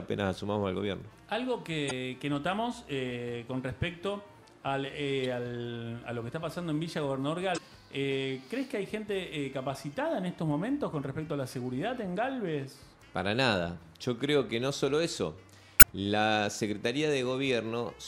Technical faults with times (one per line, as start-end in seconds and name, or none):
1.87-1.91 damaged data in a compressed stream
5.24 damaged data in a compressed stream
7.54-7.58 damaged data in a compressed stream
9.93 damaged data in a compressed stream
15.77-15.84 damaged data in a compressed stream